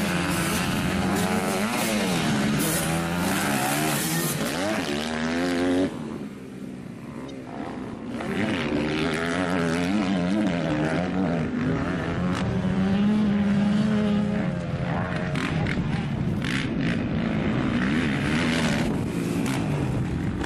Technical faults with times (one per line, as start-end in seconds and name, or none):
7.28 corrupt frame decoded